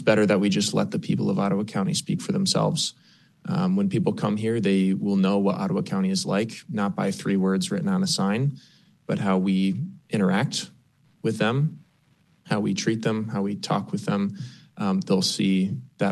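No technical faults can be heard anywhere in the audio.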